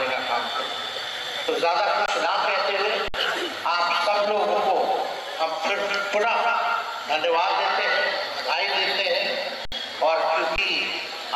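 At 2.06 to 2.08 s and 3.08 to 3.14 s, the sound freezes. These are underruns with a held sample. The output buffer ran dry, and the converter held its last value. The waveform sits flat. About 20 and 70 ms of audio are lost.

From 7.54 to 8.12 s, a loudspeaker feedback squeal appears. A 1.5 kHz tone swells over roughly 0.4 s. The microphone hears the speaker it feeds, and the loop gain passes one. The tone peaks near the sound's own level.

The same held-sample underrun returns at 9.65 to 9.72 s, 68 ms long, and at 10.56 to 10.58 s, 20 ms long. Again the output goes flat.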